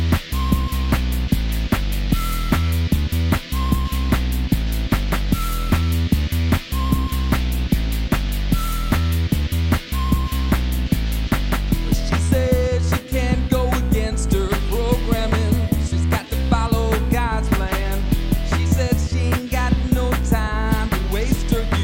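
No technical faults can be heard in this audio.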